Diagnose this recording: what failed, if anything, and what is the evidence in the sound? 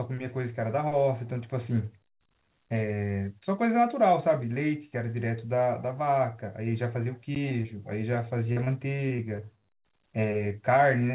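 Short concealed packet loss at 7.04, 7.49 and 7.62 s (network stage): each 20 ms hole was bridged by extending the preceding speech, leaving brief smears or wobbles.

Block of digital silence at 7.35 s (driver or buffer stage): about 11 ms drops out abruptly and is heard as a tick or dip rather than silence, which fits a 512-sample buffer left unfilled.

Repeated packet loss (robotic sound) from 8.52 to 9.40 s (network stage): six gaps, the longest 38 ms, were concealed one after another, making the G.711 call audio, which has nothing above 4 kHz, choppy.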